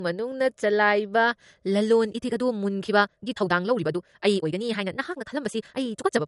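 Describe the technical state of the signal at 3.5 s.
At 3.5 s you're inside a time-stretched section that runs from about 2.10 s right to the end of the clip. The speech is rushed to twice its pace while the pitch holds steady, likely because software dropped short slices to squeeze it.

Underneath that, the whole clip shows low-bitrate audio saved at a high bitrate. The MP3 artefacts fit a likely 48 kbit/s encode later re-saved at around 239 kbit/s, which couldn't restore anything.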